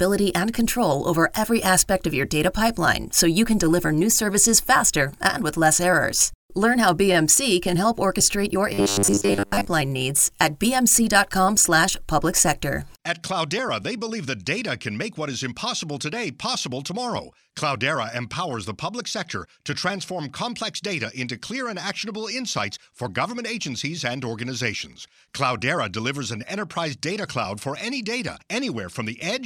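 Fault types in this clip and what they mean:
Robotic sound from repeated short buffers: from 8.73 to 9.67 s the speech turns into a rigid metallic buzz locked at 100 Hz, likely from a 10 ms stretch replayed across much of that span.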